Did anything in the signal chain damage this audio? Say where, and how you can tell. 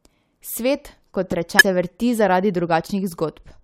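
Yes, at two points. The first is a loud pop in the analogue path at 1.32 to 1.34 s. A single sharp click sits on top of the speech, peaking around 5 dB above it. The speech carries on underneath without a break. That pattern fits a voltage pulse added to the signal. The likely cause is a connector, switch or static discharge in the wiring. The circuitry after it shaped the pulse into a brief thump.

The second fault is damaged data in the compressed stream, heard at 1.59 to 1.62 s. It is a short glitch. This points to the codec or storage stage. Some bytes of the encoded stream were wrong there. The decoder could not read those frames and lost sync. It then hunted for the next valid frame header. The garbled frames produce the glitch.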